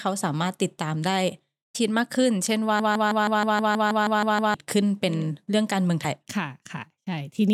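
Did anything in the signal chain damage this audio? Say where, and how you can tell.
Yes. Damaged data in a compressed stream, at the codec or storage stage, gives a brief glitch at 1.74 s and another from 6.01 to 6.05 s. The decoder misreads the corrupt frames and resyncs at the next frame header, unlike a dropout, which leaves silence.

A broken-record loop runs from 2.80 to 4.54 s: a 159 ms fragment repeats exactly, back to back, 11 times, and the speech that belonged there is lost. The likely cause is a stalled player or stream resending its last buffer. Identical repeats distinguish it from stutter or echo.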